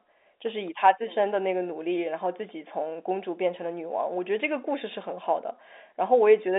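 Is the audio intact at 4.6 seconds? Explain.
Yes, the audio is intact at 4.6 seconds, with the speech carried cleanly through the G.711 telephone coding and its narrow telephone band.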